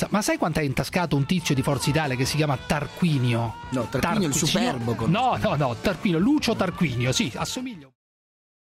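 Nothing here calls for attention; the audio just eases out in a smooth fade beginning around 7 s and done by 7.97 s, the way an editor would round it off.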